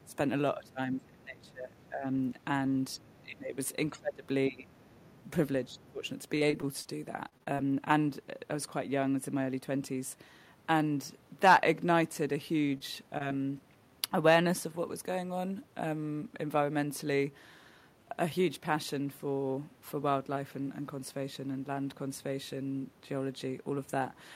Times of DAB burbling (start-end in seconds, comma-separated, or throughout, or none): none